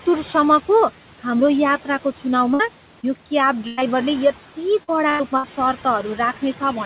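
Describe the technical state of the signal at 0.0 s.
At 0.0 s the noise suppressor is already active, and its artifacts persist throughout the clip. It is attenuating the bands it judges to be steady background by about 11 dB, recalculating every frame. The room noise, sitting about 18 dB under the speech, dips in gaps and swells back beneath talking. All of this sits within a band capped at 4 kHz, which fits a narrowband call codec.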